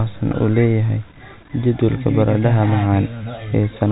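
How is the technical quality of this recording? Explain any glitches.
No glitches are audible anywhere in this speech recording.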